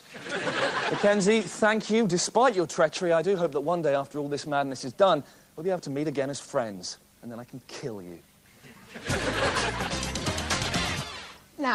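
No technical faults are audible.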